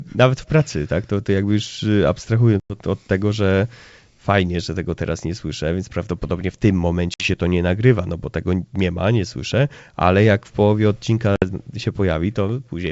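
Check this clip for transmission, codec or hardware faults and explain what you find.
Packet loss on an ADPCM call is the fault, occurring three times: 2.60 to 2.76 s, 7.14 to 7.29 s and 11.36 to 11.45 s. Packets failed to arrive and were filled with silence, leaving hard-edged holes of 100 ms, then 60 ms and 60 ms, which fits a few packets each time. Because the receiving decoder's adaptive predictor and step size drift from the sender's during the gap, the speech resumes with brief, slight distortion before settling. Between dropouts the G.722 wideband coding at 64 kbit/s is audible in the clear, extended top end of the speech.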